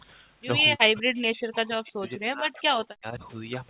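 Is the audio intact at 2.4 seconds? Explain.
No. At 2.4 s the speech sits inside a stretch of speech suppressed in double talk, running from 0.75 to 3.23 s. The likely cause is an echo canceller that, with both sides talking at once, mistook this talker for loudspeaker echo and turned it down, at its deepest by roughly 40 dB, so the speech dips and breaks up.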